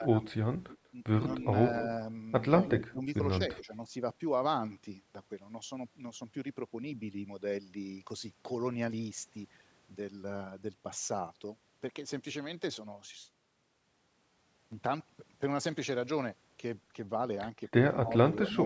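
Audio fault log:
0.0–0.23 s, 2.87–3.72 s and 18.03–18.56 s: speech suppressed in double talk. The voice dips by up to about 15 dB, about 10 dB in the last stretch, and thins out in pieces. Both sides were likely talking at once, so the echo canceller turned everything down.
0.69–0.78 s, 2.66–2.84 s, 3.52–3.57 s and 17.68–18.65 s: echo leak. A delayed copy of the voice trails by about 0.19–0.21 s. It sits about 15–25 dB down early and rises to about 10 dB below the voice at the end. A loudspeaker's echo likely slipped past cancellation.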